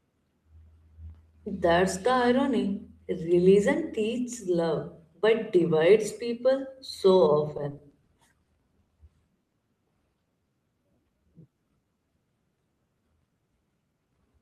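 From 7.57 to 8.92 s, repeated stalls (stutter) hit the speech. Seven late-packet gaps, the longest 60 ms, were bridged with 180 ms of continued sound. The waveform shows smeared, repeated segments.

At 9.43 to 9.55 s, a short stall from a late packet holds one sound for 90 ms. On a spectrogram this appears as a flat, stretched band with a slight dip.

Between 10.26 and 11.99 s, a jitter buffer slow-down repeats pitch periods, adding 197 ms. The speech plays at 89% speed at unchanged pitch, with spectrogram harmonics drawn out horizontally.

From 13.74 to 14.41 s, a jitter buffer speed-up trims about 100 ms of pitch periods. The speech runs at 114% and sounds hurried, with whole periods cut from the waveform.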